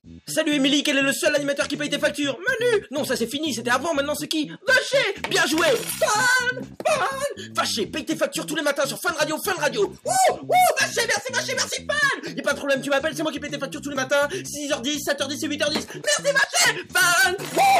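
At 7.0 s, 13.96 s and 16.44 s the capture software likely failed to read its input buffer before the hardware overwrote it, a dropped buffer (overrun). Each lost piece is simply spliced out, so the audio never goes silent. Instead it jumps forward abruptly, skipping about 10 ms at the first two points and roughly 20 ms at the last.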